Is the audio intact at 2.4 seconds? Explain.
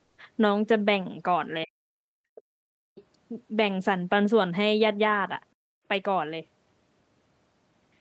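No. From 1.97 to 2.95 s the background is gated by the echo canceller: while the far end played through the loudspeaker, the canceller pulled the microphone down by up to about 39 dB, so the room sound drops out for about a second before recovering. Inside that window, from 2.35 to 2.41 s, a brief scrap of the other side's voice leaks through, roughly 25 dB below the main speech. It is likely residual loudspeaker echo that the canceller failed to remove, heard as a faint fragment.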